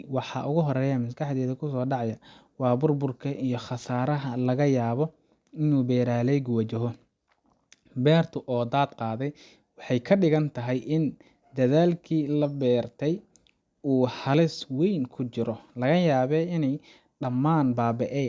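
No technical faults can be heard anywhere in this speech recording.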